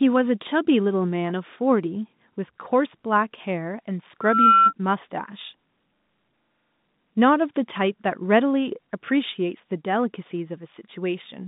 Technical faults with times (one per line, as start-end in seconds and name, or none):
4.21-4.73 loudspeaker feedback squeal